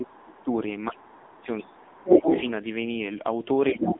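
From start to finish the speech carries the AMR narrowband mobile codec. The line sits between about 200 Hz and 3.6 kHz, with nothing above 3.8 kHz, and the voice has the buzzy, synthetic edge of a low-rate setting, which fits AMR-NB at around 8 kbps. Unlike a plain low-pass filter, the loss here comes from a vocal-tract model rebuilding each 5 ms from a few pulses. That gives a grainy, artificial texture rather than simple dullness.

In the first half-second, 0.0 to 0.5 s, the talker's level sinks by roughly 20 dB for a total of around 400 ms. This is likely speech suppressed in double talk. An echo canceller that cannot tell the talker from the loudspeaker turns both down, so the voice dips in pieces rather than fading the way a distant talker would.

During that dip, from 0.06 to 0.44 s, a very faint second voice sits about 30 dB below the speech. This is likely the other side's voice leaking through, residual echo the canceller did not remove.

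From 1.04 to 2.51 s the leak is far stronger, roughly 5 dB above the talker. It is a separate voice, not a smeared copy, so it is not reverberation.

At 3.72 s, to the end of the clip, suppression returns at about 15 dB for roughly 150 ms, and the leak reappears from 3.8 to 3.95 s at a similar strong level.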